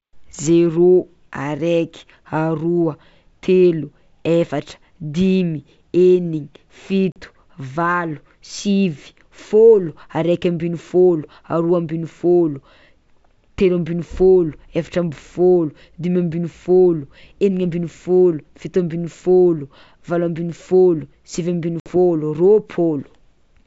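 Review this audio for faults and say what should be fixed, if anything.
Packet loss on an ADPCM call occurs at 7.12–7.21 s (40 ms, a couple of packets) and 21.80–21.90 s (60 ms, about three packets). Each leaves a hard-edged silent gap. The decoder's predictor and step size then mismatch the sender's, so the sound returns distorted or mis-levelled until it resyncs.

Adding packet loss concealment with decoder state resynchronisation, plus forward error correction or redundant packets on the G.722 stream, would prevent these gaps and glitches.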